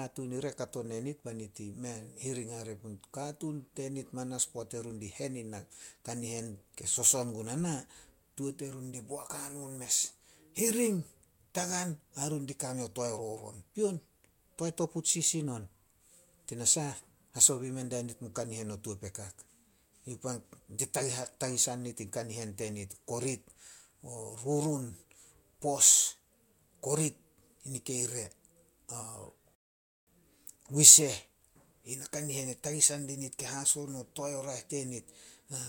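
A speech recording with two separate faults. At 19.15 s, just after "mun kanihen o tuo", a single sharp snap sits on top of the speech. This is an electrical switching spike, likely from a nearby switch, motor or static discharge arcing into the audio line. It differs from a digital click or dropout because the speech underneath carries on unbroken. The snap is added to the sound, and nothing is removed or repeated. At 29.55 s the audio cuts to silence until 30.07 s, then resumes at exactly the point where it stopped. This is a rebuffering stall: the player ran out of downloaded audio and waited for more, adding about 0.52 s of dead time. A packet-loss dropout would skip material, but here no speech is lost and the gap simply lengthens the clip.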